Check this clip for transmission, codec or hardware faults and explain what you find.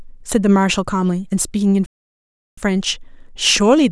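One fault stands out: a playback stall in the middle of the speech, from 1.86 s to 2.58 s. The player was likely starved of data or had its output thread blocked, so nothing reached the output for about 0.71 s. The speech stops abruptly in mid-flow and there is a dead gap of silence, not a fade or a dropout of a few milliseconds. Then the voice simply picks up again once playback recovers.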